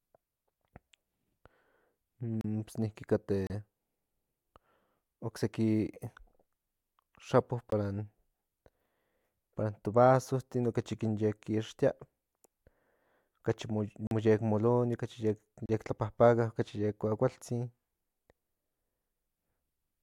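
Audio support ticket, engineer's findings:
Audio output path, probable buffer underrun: output blocks not filled in time and zero-filled, giving a block of digital silence with hard edges at 2.41, 3.47, 7.70, 14.07 and 15.66 s. Gaps of 21 to 43 ms (the 21.33 and 42.67 ms gaps fit 1024- and 2048-sample blocks at 48 kHz) cut the speech to silence, heard as a short hole.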